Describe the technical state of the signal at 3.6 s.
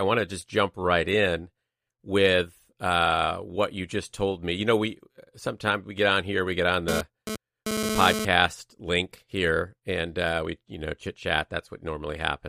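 At 3.6 s the speech signal is intact, with no audible dropout, distortion, clicks or other technical fault.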